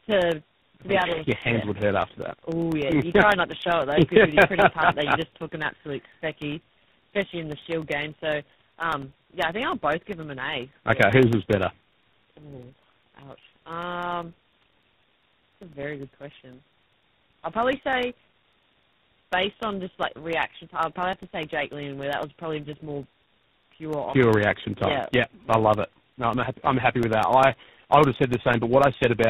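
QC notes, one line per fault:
Throughout: tandem speech coding. The speech passed through three speech codecs in a row, with each one re-coding the last one's losses. That leaves it rough, muffled and warbly. A spectrogram shows a hard ceiling at 3.8 kHz, nothing above it, and smeared, unsteady formant bands.
0.12 to 29.24 s: periodic USB or driver dropouts. Every 0.1 s, roughly a millisecond of audio is replaced by silence. This gives about 300 regular ticks that are heard only under speech. The waveform shows evenly spaced notches of near-silence, and the spectrogram shows thin vertical broadband lines.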